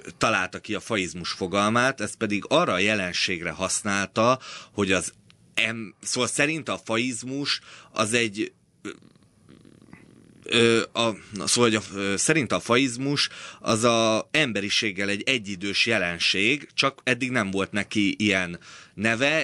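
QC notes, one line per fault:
Nothing in the speech signal departs from a continuous, intact playback at steady level, with no events to log.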